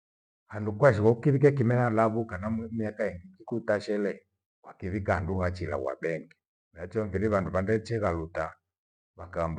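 Nothing in this recording trips any alarms: there's no dropout, glitch or distortion to point to anywhere along the way.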